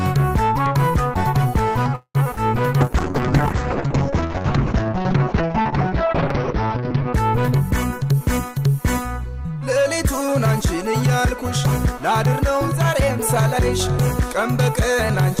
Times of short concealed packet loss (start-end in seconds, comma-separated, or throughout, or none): 2.35-2.38